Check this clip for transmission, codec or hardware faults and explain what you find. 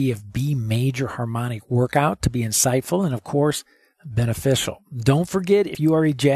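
One codec fault is audible. At 5.74 s, compressed frames are skipped. Around 70 ms of speech goes missing, which fits about three dropped frames of 23.2 ms each. The speech jumps ahead by that amount where the missing frames were left out.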